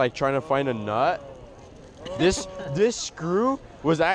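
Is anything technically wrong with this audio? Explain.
No, nothing technically wrong can be heard in this audio. No fault turns up anywhere in the clip.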